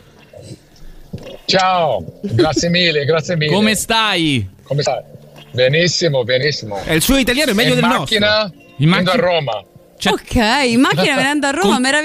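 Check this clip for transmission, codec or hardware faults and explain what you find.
One fault stands out, a short burst of damaged data in a compressed stream from 4.82 to 4.88 s. For about 56 ms the sound is disrupted. Part of the encoded stream there is corrupted, so the decoder misreads those frames, loses its place and hunts for the next valid frame header. The garbled frames produce the disruption.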